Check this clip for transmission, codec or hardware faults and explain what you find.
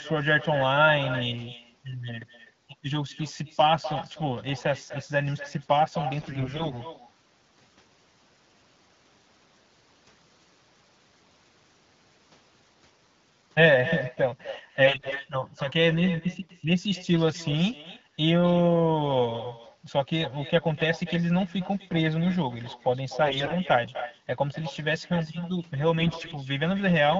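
Two problems stand out: a constant echo with no canceller, and four short bursts of AMR bit errors.

The echo runs the whole way through. Everything said comes back roughly 300 ms later, about 12 dB down, as a thinner shadow. That's the far end playing the call over a loudspeaker, its mic picking it up, and nothing removing it, so the audio returns after a full network round trip. With the delay that long, you hear it as a distinct repeat.

The AMR bit errors land at 6.20–6.77 s, 14.83–15.28 s, 23.24–23.53 s and 26.00–26.35 s. In each stretch the sound holds its rough pitch and level but turns hoarse, scratchy and gargly. On a weak radio link, a fair chunk of the less-protected bits in each frame arrived flipped. The checksum only guards the important bits, so the frames were still decoded. The excitation pulses end up misplaced, and the finer gain and spectral values drift. Elsewhere the wideband codec sounds clear.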